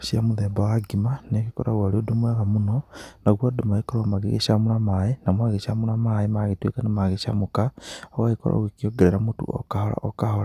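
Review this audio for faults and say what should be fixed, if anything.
Nothing here needs fixing, since no faults turn up anywhere in this speech recording.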